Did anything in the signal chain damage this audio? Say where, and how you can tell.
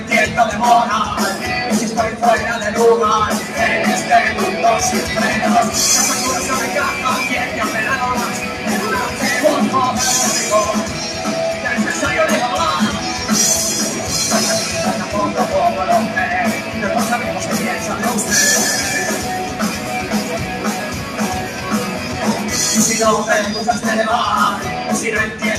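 Yes. The call-processing stage's noise suppressor cut the sound from 21.04 to 21.19 s, roughly 150 ms. The suppressor misjudged this stretch as background noise and lowered its gain, with the level sinking by about 4 dB at the deepest point before recovering. It is a partial dip, not silence, which separates it from a packet dropout or buffer gap. It lacks the attack-and-release shape a compressor's gain pumping would give around a loud onset.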